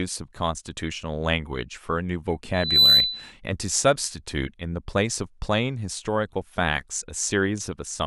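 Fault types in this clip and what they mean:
Loudspeaker feedback squeal: a pure 4 kHz tone swells over roughly a third of a second from 2.54 s and rings about 10 dB above the speech until 3.33 s, as the microphone picked up its own loudspeaker and the loop ran away at that frequency.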